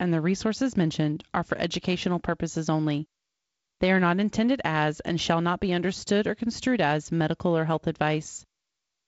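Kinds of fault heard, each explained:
No faults can be heard in this speech clip. It carries the sound of G.722 wideband telephone coding, with nothing above 7.7 kHz and the light coding grain expected at 48 kbit/s.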